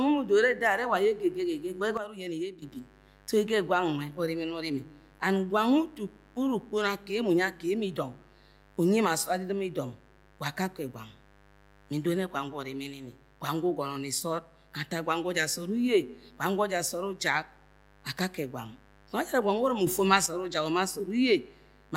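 A mains buzz runs under the speech from start to end. It is a steady raspy tone on 50 Hz harmonics, roughly 30 dB below the speech. At 1.97 s the level drops by about 10 dB, returning at 2.62 s. At 19.87 s it rises by about 7 dB until 20.26 s. These are sudden gain jumps, likely from unramped digital gain changes.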